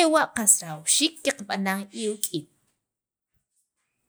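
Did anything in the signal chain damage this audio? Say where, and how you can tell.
No, nothing along the chain seems to have touched this speech recording, and there's nothing to point to at any stage.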